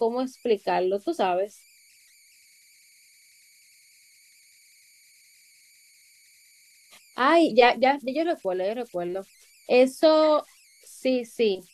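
A faint whistle around 2 kHz runs through the pauses, with grainy noise under the speech, from start to finish, sitting about 35 dB below it. These are converter idle tones: the delta-sigma converter that digitised the sound was run without dither, so its small-signal behaviour settled into repeating bit patterns instead of random-looking noise. Those cycles produce a tonal error rather than a neutral hiss, and the input's offset set its pitch near 2 kHz.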